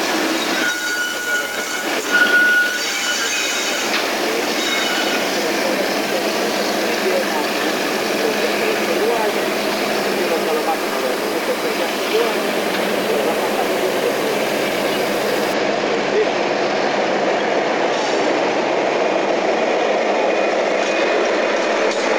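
From 0.0 to 15.53 s the audio carries a coarse, grainy distortion that tracks the signal, rough on louder passages and harsher in quiet ones, where low-level detail sputters or drops out between steps. The error sits only around 15 dB below the signal. This is low bit depth without dither: the likely cause is samples rounded to very few levels, consistent with about 5-bit resolution, with no dither to decorrelate the error.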